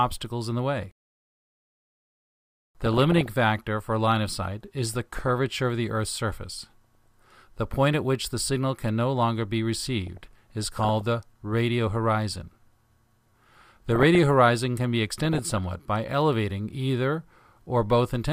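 DAB burbling occurs at 2.81–3.30 s, 4.83–5.31 s, 6.66–7.35 s, 10.07–11.01 s, 13.51–14.19 s and 15.05–15.58 s, each lasting roughly half a second to a second. Weak reception lets bit errors, at a rate of somewhat under one percent, slip past error correction into the MP2 stream. Corrupted samples add short noise blips within individual sub-bands, and any damaged scale factors make sub-bands jump in level, producing watery, bubbling chirps over the sound.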